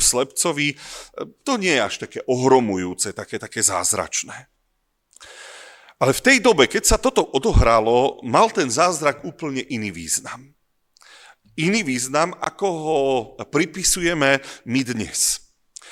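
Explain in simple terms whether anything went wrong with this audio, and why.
Something did go wrong, briefly. From 7.26 to 8.82 s, right after "dobe keď sa toto" and just before "úplne iný význam", there is channel delay (comb filtering). One side of the stereo sound arrives a tiny moment late, roughly a single sample. When both sides are mixed into one, some high frequencies cancel. Here the first gap sits near the top of hearing, around 20 kHz. So the effect is mild. The speech just loses a little airy sparkle and sounds slightly dull.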